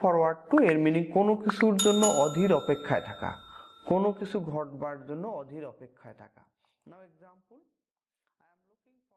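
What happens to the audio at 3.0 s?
Nothing goes wrong at 3.0 s; the sound there is intact, with no dropout, click or level change.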